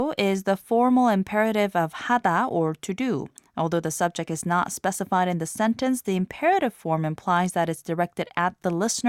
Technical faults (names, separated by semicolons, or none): none